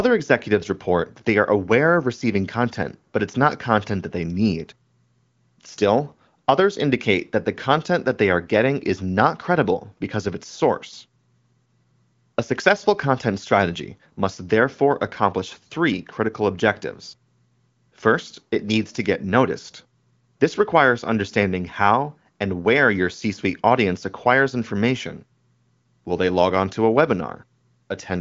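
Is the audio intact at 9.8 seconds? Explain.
Yes, the audio is intact at 9.8 seconds, with no fault at that moment.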